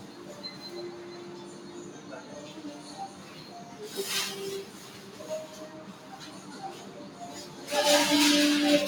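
From start to finish, a noise suppressor built for speech is working on these sounds. It takes sustained tones and ambience for noise and pulls them down by around 15 dB, so onsets survive while decays sink and flutter. Unlike compressor pumping, loud peaks don't drive the dips.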